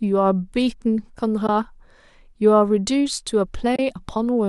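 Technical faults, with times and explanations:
1.47–1.49 s and 3.76–3.79 s, AAC frame loss with muting: brief soft dropouts of 20 and 30 ms, fitting two and three lost 10 ms frames zeroed by the decoder. Overlapping windows taper the edges. They show as narrow full-band spectrogram gaps and smooth waveform dips to silence.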